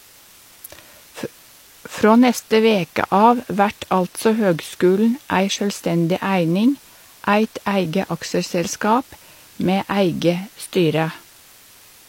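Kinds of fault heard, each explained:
Low bit depth with dither: the speech has been reduced to about 8 bits, with random dither added before each sample was rounded, so the rounding error becomes an even hiss rather than grainy distortion. The hiss sits roughly 30 dB below the speech and stays constant throughout. A spectrogram shows a flat, uniform noise floor spread across all frequencies, and the waveform keeps a steady fuzzy band around zero between phrases.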